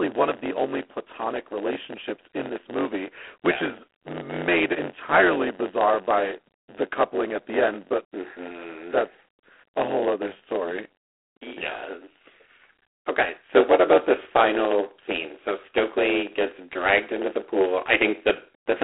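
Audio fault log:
Throughout: block size mismatch (padded). A steady buzz at about 92 Hz sits under the speech, and everything drags, running at about 0.92 of normal speed while the pitch stays about where it belongs. One stage hands over blocks shorter than the next stage expects, and the shortfall in each block is filled with silence. That tiny dropout repeats at the block rate, producing the buzz, and the added gaps stretch the timeline without transposing it.
Throughout: G.726 ADPCM. The speech carries a plainly audible harsh, rasping hiss that swells and fades with its loudness, and it sounds thin and boxy, confined to a telephone band of roughly 250 Hz to 3.4 kHz with nothing above 3.9 kHz. The codec sends only a few bits per sample of the difference from an adaptive prediction. The coarseness of the hiss fits the 24 kbit/s rate, where that small step budget leaves quantisation noise that tracks the signal level.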